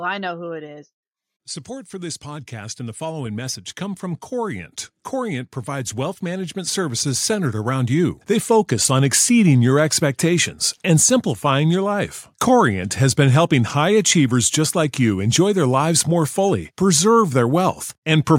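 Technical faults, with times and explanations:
1.67 to 9.21 s, automatic gain rising: the level of the speech climbs steadily by about 15 dB over roughly seven and a half seconds, settling just before "your expectations and simplifying". The automatic gain control judged the incoming signal too quiet and kept nudging its gain upward. Because it amplifies everything it receives, the voice and the background noise floor swell together as the boost accumulates.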